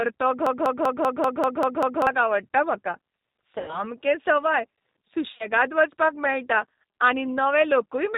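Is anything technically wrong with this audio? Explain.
Yes. The whole recording carries plainly audible G.729 codec damage: 8 kbit/s pulse-based speech modelling cuts everything above 4 kHz and leaves the speech rough and synthetic.

From 0.47 to 2.07 s a broken-record loop repeats a 0.19 s fragment eight times back to back before "आवडटा म्हाका". The likely cause is a stalled stream resending its last buffer, and the audio that belonged there is gone.

VoIP packet loss concealed by the speech codec occurs at 3.58 to 3.83 s, where about 100 ms is lost, which fits ten 10 ms frames. The decoder extrapolates a fading buzzy tone or coloured noise and recovers weakly.

A second case at 5.32 to 5.49 s, just before "वचपाक मेळटा", scatters 60 ms of loss over 80 ms, with gaps of up to 30 ms, giving brief stretched, fading sound.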